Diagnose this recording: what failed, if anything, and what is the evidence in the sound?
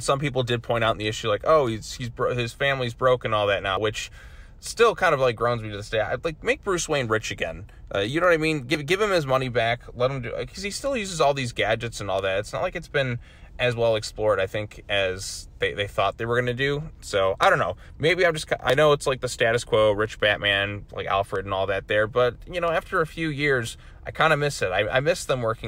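The capture or processing chain, likely at the driver or buffer stage writing audio in blocks of about 5 s, is dropping a sliver of signal each time it hands off from one block to the next. The result is audio missing between chunks: at 3.77, 8.75, 13.72, 18.70 and 23.67 s a few tens of milliseconds vanish, and the sound on either side is butted together without any gap, giving a brief, evenly spaced skip.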